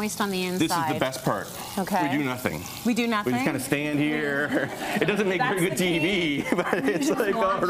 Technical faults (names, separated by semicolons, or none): none